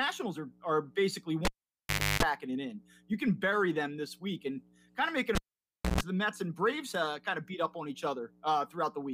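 At 1.45 to 2.23 s and again at 5.35 to 6.01 s, a cable is pulled and plugged in. Each time a pop drops the audio into near silence for about 0.73 s, then 0.61 s. Unlike a plain dropout, a mains buzz follows while only the plug tip touches: 50 Hz for 0.31 s the first time, 60 Hz for 0.14 s the second. A second pop marks the return.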